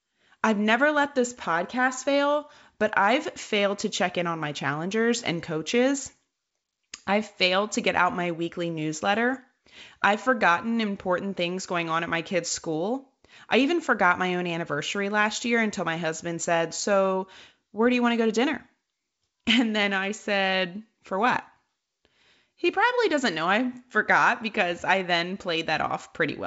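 Nothing's wrong with this speech clip: it sounds like ordinary G.722 wideband telephone coding, with the audio topping out around 7.7 kHz and at most a faint trace of the codec's upper-band hiss, which is just what that path normally gives.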